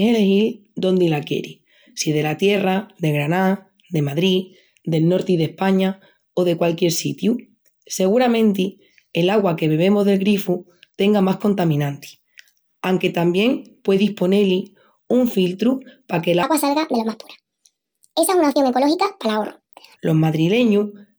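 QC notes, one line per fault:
16.43–19.96 s, section at the wrong speed: speech plays 1.5 times fast, about seven semitones high, likely a clock mismatch; spectrogram harmonics jump upward, waveform looks squeezed.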